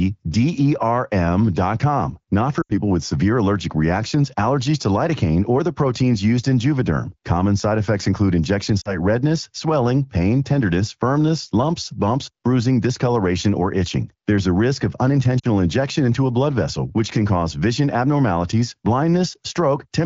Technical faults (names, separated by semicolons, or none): lost AMR speech frames